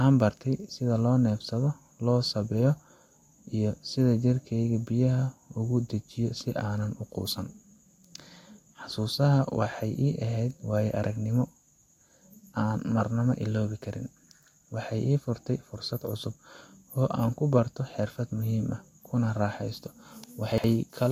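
At 20.52 s, near the very end of the speech, a brief stretch of chunks out of order runs to 20.64 s. One 60 ms chunk arrived late and plays after the chunk that should have followed it, so the two swap places and leave three hard joins. It sounds like a quick jumbled stumble. Unlike a dropout, nothing goes silent or missing, and unlike a stutter, nothing is repeated. The same audio is simply rearranged.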